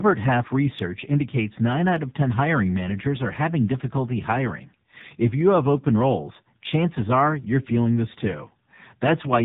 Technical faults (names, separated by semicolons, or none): AMR narrowband mobile codec; clock slip clicks